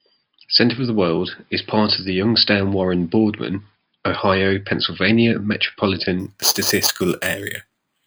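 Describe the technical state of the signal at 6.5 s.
At 6.5 s the signal shows imaging from sample-and-hold upsampling, running from 6.2 s to the end of the clip at 8.06 s. Each sample appears to have been repeated with no smoothing filter, which fits raising an 11 kHz rate to 44.1 kHz. The speech band is mirrored into a first image spanning roughly 5.5 to 11 kHz at about -6 dB relative to the signal. It is heard as a bright metallic fizz that tracks the speech level.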